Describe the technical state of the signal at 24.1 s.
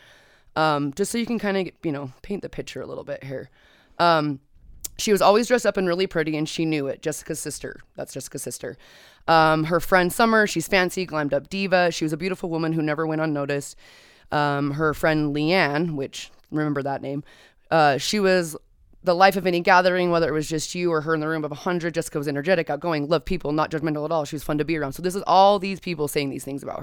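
At 24.1 s the signal is intact, with no audible dropout, clipping, distortion or other fault at that moment.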